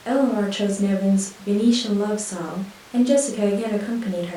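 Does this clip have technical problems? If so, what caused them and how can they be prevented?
No, no technical faults present.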